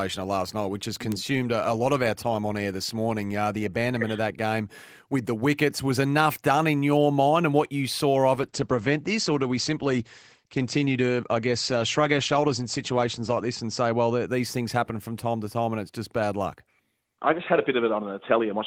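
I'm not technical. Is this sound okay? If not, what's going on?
No, there are two problems. At 1.12 s there's a bit error spike: one tiny piece of the digital audio got corrupted, so for a split moment the sound jumps to a wrong value and snaps straight back. You hear it as a single sharp tick that has nothing to do with the speech. It's over almost instantly and doesn't affect anything around it.

The bigger one is a call bitrate drop from 8.35 s to 14.33 s. The call decided the connection could carry much less data, so the audio was squeezed far harder for about six seconds, and at its worst for roughly five. The speech turns rougher and more muffled, and the crisp top end goes, because everything above about 8 kHz is cut off. It then clears up once the connection recovers.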